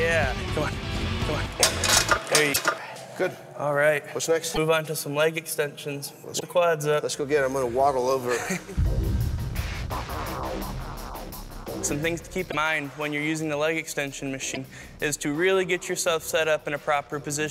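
A doubled audio track runs from the start to 2.78 s. A second, equally loud copy of the sound trails about 0.7 s behind, with no decay or room colour, and stops abruptly. This is likely from the audio being captured again through a slower path. Broken MP3 bit reservoir faults occur at 2.52–2.57, 4.53–4.58, 6.39–6.43, 12.50–12.55 and 14.54–14.57 s. The sound jumps ahead and leaves a brief chirp, noise burst or hole. The likely cause is that 26.1 ms frames were dropped, so later frames read borrowed bytes from the wrong frame.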